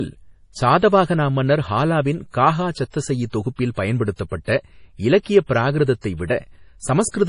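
Speech, with MP3 compression damage throughout. Treble stops at 10.6 kHz. Weak detail flickers in and out, giving a heavy watery swirl. That fits a low bitrate, likely around 32 kbps.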